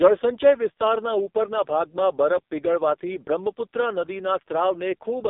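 From start to finish the speech sounds buzzy, thin and synthetic, squeezed into a telephone band of roughly 250 Hz to 3.7 kHz with nothing at all above 3.7 kHz. This is the AMR narrowband mobile codec, heavily damaged: the voice is rebuilt from a vocal-tract model fed by a handful of pulses per subframe, and so harsh a rendering fits the very low 5.15 kbps mode, where too few bits remain to keep it natural.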